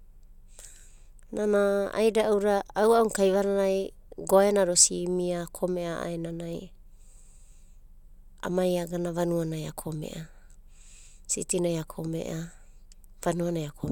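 No technical faults can be heard anywhere in the speech.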